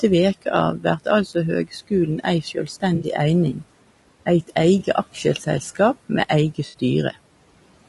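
Speech throughout, with a rough, grainy texture, noise creeping in between the harmonics and a thin, synthetic top end. That's most likely low-delay AAC compression (AAC-ELD), and the damage fits something around 32 kbps. At that rate there aren't enough bits to code the spectrum finely, so quantization noise fills in between the harmonics. The speech gets cut by the noise suppressor four times: at 0.78 to 1.07 s just after "veke av", 1.65 to 1.92 s, 2.43 to 2.83 s and 3.53 to 3.63 s. Bits of the voice get pulled down about 16, 14, 17 and 8 dB along with the background, so those bits sound swallowed or faint. There's AAC frame loss with concealment at 2.95 to 3.05 s and 6.67 to 6.75 s, each about 60 ms, plus a shorter 20 ms one at 4.79 s. The decoder patches these from the last good spectrum, so they come out as smeared, phasey blurs. The room noise sits about 20 dB under the speech.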